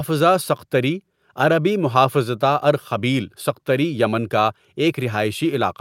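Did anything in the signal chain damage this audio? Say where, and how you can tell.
No, nothing in the chain from capture to playback has left any audible damage on this speech recording.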